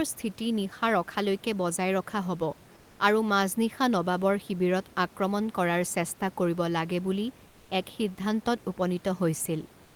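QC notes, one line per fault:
7.49–7.69 s and 9.85–9.96 s: comfort noise in place of the background. In these two pauses (200 ms, then the final 107 ms) the room noise, normally about 28 dB below speech, gives way to a smooth, textureless hiss about 3 dB and 2 dB quieter. This is likely Opus DTX halting transmission while a decoder synthesises filler. On a spectrogram the grainy background turns uniform and slightly fainter, and the waveform envelope flattens and steps down.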